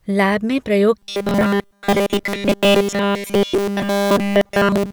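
Right after "लैब में प्रयोग", at 0.99 s, robotic sound from repeated short buffers sets in and lasts to the end at 4.93 s. Essentially all of the sound in that stretch turns into a stiff, metallic buzz pitched at 200 Hz that only loosely tracks the speech. The likely cause is audio arriving too slowly, with each 5 ms chunk replayed in place of the skipped material. A spectrogram would show rigid horizontal harmonics every 200 Hz, and the waveform would show identical 5 ms cycles repeating.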